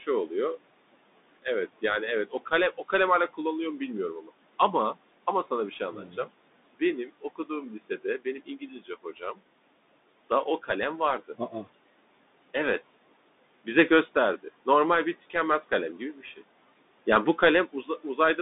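Noise suppressor artifacts run through the whole of this speech recording: a frame-by-frame suppressor pulls down every band it judges to be steady noise, by about 18 dB. The room noise, which sits about 19 dB below the speech, therefore drops away in the gaps between words and comes back up underneath them, so the background pumps in step with the talking rather than staying constant. The Bluetooth CVSD headset codec is also present for the full length, and its damage is plainly audible. The sound is confined to a telephone-like band of roughly 200 Hz to 3.7 kHz, and nothing reaches above 3.8 kHz, which fits a 64 kbps CVSD headset link. That codec sends a single up-or-down bit per sample with an adapting step size, so sharp, loud high content overruns the step and distorts, and a gritty hiss lies beneath the speech. Speech cut by the noise suppressor occurs four times, where the suppressor mistook parts of the speech for noise and turned them down along with the background. 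This happens at 4.21 to 4.3 s (down about 11 dB), at 7.06 to 7.5 s (about 12 dB), at 8.25 to 9.4 s (about 14 dB, the longest, with around 400 ms affected), and at 15.98 to 16.42 s (about 12 dB). In each case the affected sounds come out swallowed or faint.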